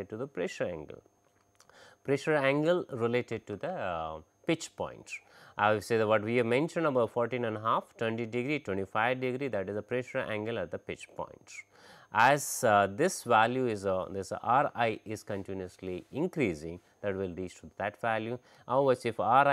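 No technical faults are audible anywhere in the recording.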